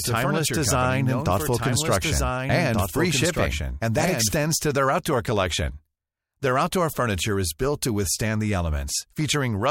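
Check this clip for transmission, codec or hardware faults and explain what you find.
One fault is present: a doubled audio track, already under way when the clip begins and ending abruptly at 4.44 s. From 0 to 4.44 s a second full-band copy of the speech runs roughly one and a half seconds behind the original, about 5 dB quieter, with no decay or room colour, so it sounds like an overlapping duplicate rather than an echo. The likely cause is the same signal being captured again through a slower path, or an edit holding two offset copies.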